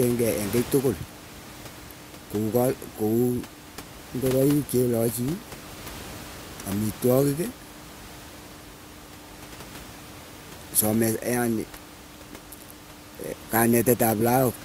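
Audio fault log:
No fault is present in this speech clip. The room noise can be heard sitting about 18 dB below the speech, as part of the recording.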